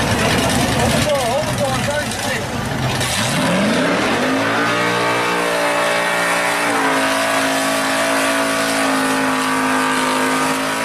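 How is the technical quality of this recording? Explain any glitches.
Nothing stood out as a technical problem on listening, so there are no glitches to explain.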